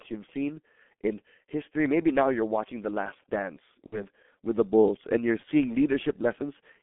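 From the start, the speech carries G.723.1 codec damage: the band sits between 200 Hz and 3.5 kHz, with nothing above, and the coding is heavy, which fits the low rate of about 6 kbit/s this codec runs at. Its 30 ms frames and slowly updated voice model leave the voice muffled and hoarse, and consonants lose their edges and smear into the surrounding vowels.

From 3.86 to 4.04 s there is VoIP packet loss concealed by the speech codec. The gap sounds like about 60 ms of missing audio, which fits two lost 30 ms frames. The decoder fills it by extending its last pitch and filter state while lowering the gain, so the sound stretches out and fades. Because each frame builds on the previous one, the voice stays weak or distorted as it recovers into "with the".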